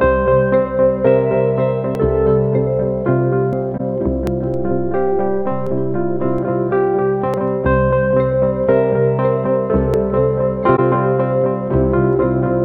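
Six abrupt skips run through the audio, at 1.95, 3.53, 4.27, 5.67, 7.34 and 9.94 s. Each is a point where the sound jumps forward with no gap of silence. Five lose about a tenth of a second, and the one at 5.67 s loses roughly a third of a second. A jump with no hole points to a dropped buffer (overrun), likely from the capture software failing to collect its samples before the hardware reused that memory, so the material on either side is spliced straight together. Two much shorter blemishes behave differently, at 3.77 to 3.81 s and at 10.76 to 10.79 s. Each lasts about 35 ms, with no click and no loss of time, and each fits a single damaged AAC frame that the decoder detected and concealed. This is a corrupt frame concealed. Unlike the overruns, nothing is skipped. Between 4.54 and 6.38 s there is a DC step. The waveform's zero line shifts at 4.54 s and returns at 6.38 s, and each change is heard as a low thump while the sound carries on unaltered. 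The thump has a dull, low-frequency character and skips nothing, which sets it apart from the overrun skips. One of those skips, at 5.67 s, falls inside this offset stretch.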